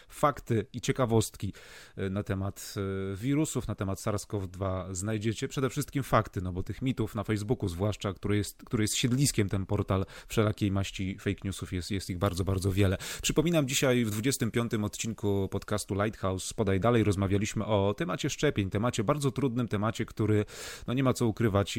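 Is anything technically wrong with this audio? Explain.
Yes. Pre-emphasis left on appears from 12.17 to 15.78 s, right after "newsów jest jest ich". The treble was lifted before storage and the matching de-emphasis cut was never applied on playback, so the boost stays in the sound. High frequencies sit about 8 dB above 1 kHz at 10 kHz, a shape that fits the CD 50/15 µs curve. Over that stretch the speech turns thin and overly bright, with exaggerated, hissy sibilants.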